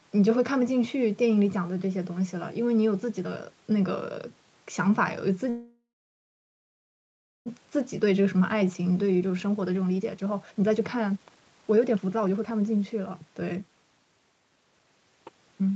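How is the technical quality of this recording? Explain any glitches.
The recording has two linked glitches in the middle and second half of the speech.

From 5.49 to 7.48 s, a call audio freeze: the last sound carries on as a fading buzz or hiss, then about 1.6 s of silence, and the speech resumes where it stopped. This is likely delayed packets emptying the jitter buffer, inserting a gap of nearly 2 s without losing any speech.

From 7.61 to 14.87 s, a jitter buffer speed-up: the speech runs noticeably hurried, at about 127% speed, with the pitch unchanged. To clear the built-up delay, the receiver repeatedly cut out pitch-period-sized slices, roughly 2 s in total.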